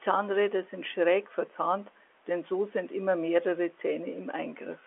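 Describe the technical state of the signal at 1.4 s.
At 1.4 s the speech is intact, carried normally over G.711 telephone coding, with the band-limited telephone sound and nothing above about 3.8 kHz.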